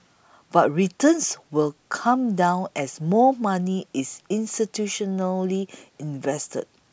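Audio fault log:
Nothing stood out on listening to this speech recording.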